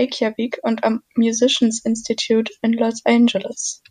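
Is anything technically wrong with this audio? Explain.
No, nothing in this speech recording stood out as technically wrong on listening.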